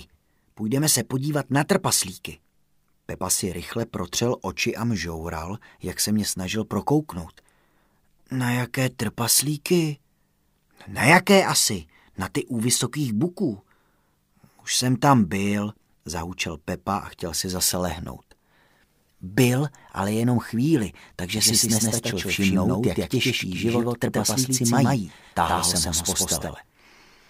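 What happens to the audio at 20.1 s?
Nothing goes wrong at 20.1 s: the audio plays through that moment intact, with no dropout, click, glitch or other fault.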